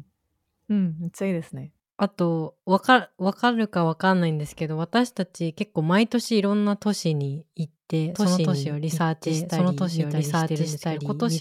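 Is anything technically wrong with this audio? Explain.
Yes. From 8.14 s to the end there's a doubled audio track: a second full-band copy of the speech runs about one and a half seconds behind, roughly as loud as the original, kicking in abruptly with no room colour. Likely an edit stacking two out-of-step copies.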